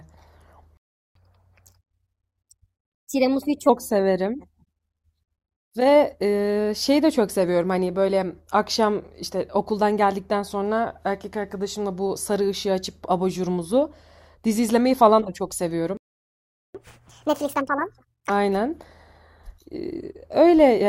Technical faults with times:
0.77-1.15 playback stall
1.15-3.69 catch-up at higher speed
15.97-16.75 playback stall
16.75-18.30 catch-up at higher speed

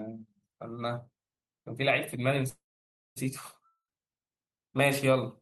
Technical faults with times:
2.49-3.18 call audio freeze
3.66-3.92 long network dropout

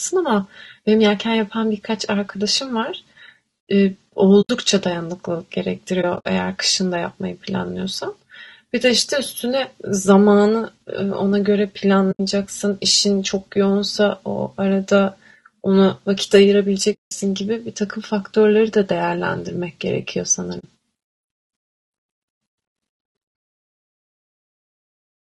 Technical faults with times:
0.00-25.30 low-delay AAC compression
4.41-4.50 AAC frame loss with muting
6.01-6.26 AAC frame loss with muting
12.11-12.20 AAC frame loss with muting
16.93-17.12 AAC frame loss with muting
20.59-20.65 AAC frame loss with muting

